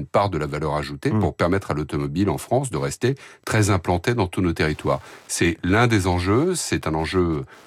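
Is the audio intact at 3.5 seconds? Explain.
No. From 2.35 s, just after "permettre à l'automobile en", to the end of the clip, there is Wi-Fi interference: a nearby Wi-Fi radio's beacon, sent every 102.4 ms, is being picked up and rectified by the audio circuitry, so its pulses become audible. At 3.5 s this shows as a steady ticking about ten times a second, running well beneath the speech at roughly 35 dB down.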